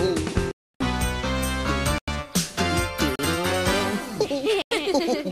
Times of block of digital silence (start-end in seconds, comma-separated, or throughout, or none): 0.52-0.74, 1.98-2.08, 3.16-3.19, 4.62-4.71